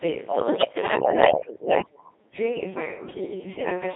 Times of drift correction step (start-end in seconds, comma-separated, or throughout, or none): none